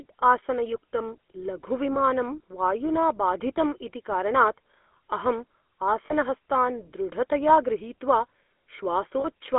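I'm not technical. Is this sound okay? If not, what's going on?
No. Throughout, the speech has the buzzy, gravelly roughness of the GSM full-rate codec, the one used in early mobile phones. It sounds like a phone call, passing roughly 250 Hz to 3.5 kHz, but unlike simple muffling it adds a rasping, grainy edge.

There are also lost GSM frames at 1.94–2.02 s, 6.06–6.13 s and 9.20–9.25 s. Instead of a silent gap or a click, the sound briefly freezes into a short metallic ring while the phone repeats its last good moment.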